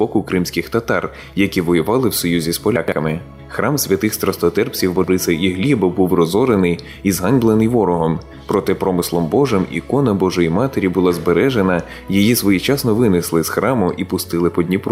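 All the way through, there's gain pumping: a swing of roughly 5 dB. That's likely the input gain set far too hot with a fast limiter clamping down, so everything sounds squashed.

At 2.76 to 2.92 s, there are chunks out of order. A 40 ms piece lands three chunks late, after material that should follow it, so you get a brief jumbled stutter. The same thing happens at 4.96 to 5.08 s, this time two chunks late.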